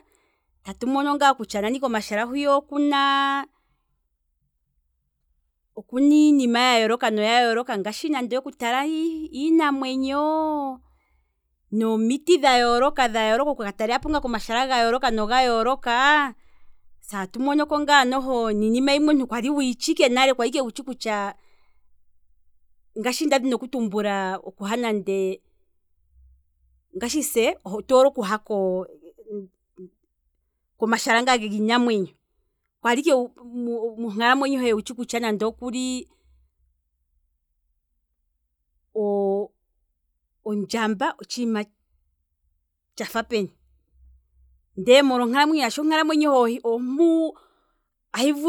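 Nothing stood out as a technical fault on listening to this speech recording.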